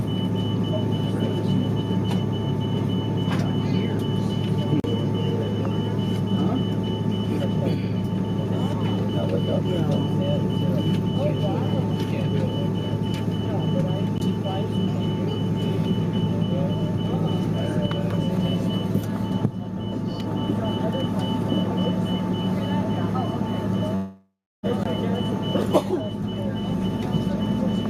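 Blocks of digital silence appear at 4.80–4.84 s (40 ms), 14.18–14.20 s and 24.84–24.86 s (20 ms each): the sound cuts out abruptly, as when the output buffer isn't filled in time. A long network dropout spans 23.95–24.66 s: the last sound smears into a fading buzz, then about 0.32 s of silence, and roughly 0.68 s of audio is missing, likely from packets that never arrived.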